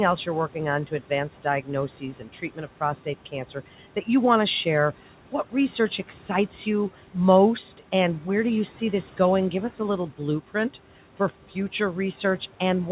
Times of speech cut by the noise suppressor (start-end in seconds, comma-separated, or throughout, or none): 2.00-2.81